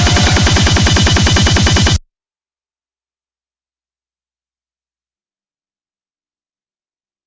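No technical faults can be heard anywhere in the audio.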